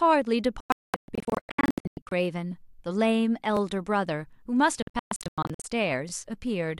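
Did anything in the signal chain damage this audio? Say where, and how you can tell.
Yes, in two places. The first is a digital broadcast dropout at the reception end. The speech breaks into short holes between 0.60 and 2.12 s: about 1.03 s of sound is gone, spread over roughly 1.5 s, and the longest silence is 0.22 s. It happens again from 4.82 to 5.65 s, with about 0.5 s lost across 0.8 s and a longest gap of 0.12 s. That patchy muting is the receiver dropping frames that failed, which fits a few dozen frames lost in the first burst.

The second is overlapping chunks in a buffer or block-processing stage. You get a quick stutter at 3.57–3.59 s and again at 6.09–6.11 s. Each one replays about 23 ms of audio, and they sit 2.5 s apart. That regular spacing is the tell: the audio was handled in 2.5 s blocks, and each new block started slightly before the previous one finished, so the overlap plays twice at every join.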